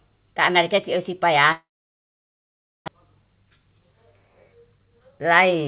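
From 1.52 to 2.90 s the sound stops: a brief fading buzz, then about 1.2 s of near-silence, likely a long network dropout, with roughly 0.9 s never heard. Afterwards, jitter buffer speed-up appears at 3.43–3.80 s (113%) and 4.56–5.68 s (124%). Pitch stays put while pacing hurries, unlike a dropout's silence, as roughly 0.35 s in total is trimmed. Throughout, the narrowband G.711 path leaves nothing above 4 kHz.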